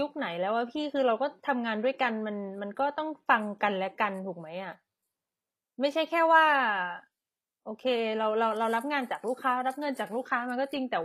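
HE-AAC compression is the likely cause of the damage heard throughout the speech: the treble is rebuilt from copied lower bands rather than coded, which fits a bitrate around 24 kbps, so s sounds come out plainly gritty, metallic and lispy.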